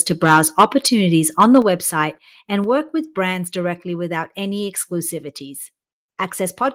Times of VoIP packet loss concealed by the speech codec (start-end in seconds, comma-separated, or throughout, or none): none